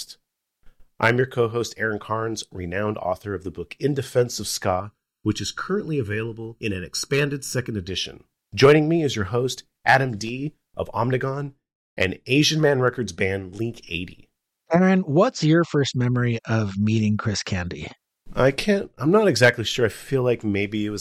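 Channel delay (comb filtering) affects the audio from 4.80 to 7.89 s. During that stretch one channel arrives late by roughly 0.7 ms, and when the two are summed to mono, the shared content cancels at evenly spaced frequencies. The first notch falls somewhere around 700 Hz, with further notches repeating up the spectrum at regular intervals. The result is a hollow, phasey coloration that holds steady for those three seconds.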